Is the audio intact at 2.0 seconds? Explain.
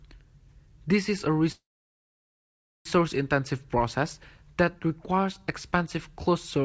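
No. At 2.0 s the audio sits inside a call audio freeze running from about 1.52 to 2.87 s. Packets were likely held up in transit, draining the jitter buffer, so the receiver stretched the last sound into a brief fading fill that soon drops to near-silence for about 1.2 s. Unlike a dropout, nothing is lost. The sound resumes exactly where it stopped, just 1.33 s later, so everything after the gap is shifted late.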